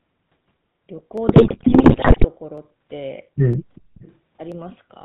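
Throughout, the speech carries the GSM full-rate codec at 13 kbps, and its damage is plainly audible. The codec rebuilds the voice from a vocal-tract filter fed by a sparse, regularly spaced pulse excitation, so the result has a buzzy, gravelly roughness. Everything above 4 kHz is gone, which leaves the speech band-limited and dull.

At 1.18 s there is a single sharp click, likely from dropped samples. A fraction of a millisecond of the stream is missing, so the waveform jumps straight from one value to a later one. The gap is far too short to remove anything audible. What remains is the discontinuity itself, seen as a thin vertical line in the spectrum. The same click returns at 2.58 s, 3.53 s and 4.52 s.

From 1.28 s to 2.25 s, GSM bit errors take over. The bit error rate is around 6 percent, and it corrupts nearly every frame across that stretch. Flipped bits in the filter, pitch and gain parameters reach the decoder. 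The spectral shape bends and the level jumps from one frame to the next. For almost a second the speech breaks up into squawks, pops and a gargling texture.

Between 3.75 s and 4.14 s a faint delayed copy of the speech appears, trailing the original by about 0.39 s. This is an echo leak, most likely caused by a far end on loudspeaker whose echo canceller let part of the microphone pickup back into the call. The returned copy sits roughly 30 dB below the direct speech, so it registers as a ghost under the main signal.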